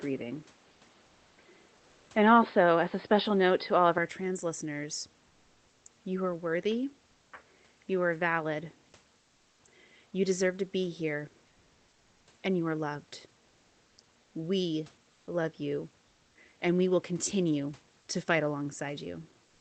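Input switched to a poorer device affects this speech clip from 0.0 to 3.98 s, likely a change to a narrower microphone or headset profile. Nothing is heard above 5 kHz, the level differs by a few decibels, and a new noise floor sits well below the voice. There is no gap at the changeover. Comfort noise in place of the background appears at 1.77–2.09 s, 9.19–9.63 s, 15.13–15.27 s and 16.07–16.35 s, lasting 320, 440, 140 and 280 ms. In each pause the real room noise gives way to a flat synthetic hiss, shifted by about 1 to 2 dB. This likely comes from discontinuous transmission as in Opus DTX.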